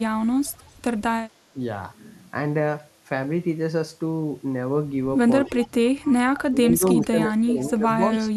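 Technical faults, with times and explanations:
0.47–0.72 s, 5.45–5.68 s, 6.03–6.13 s and 6.36–6.41 s, echo leak: a faint, delayed copy of the speech trails the original by about 0.26 s. The first copy sits very low, roughly 35 dB under the speech. The later three are clearer, around 20 dB down. The likely cause is a far end on a loudspeaker whose echo canceller let part of the returning signal through, sending it back a fixed round-trip delay later.
1.53–1.58 s, 5.46–5.89 s, 6.5–6.83 s, and 7.0 s to the end, speech suppressed in double talk: the speech sinks, losing somewhere around 10 to 20 dB at its deepest. At 1.53 s this is a short dip. The later stretches last longer, about 0.3 s each and about 0.7 s in all near the end. This likely happened because both sides were active together, and the echo canceller, unable to separate the local talker from the loudspeaker echo, turned both down.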